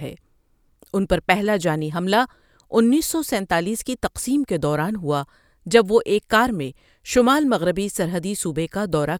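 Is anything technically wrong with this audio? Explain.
No, the signal shows no technical faults: the recording holds steady and continuous throughout, with nothing breaking into it.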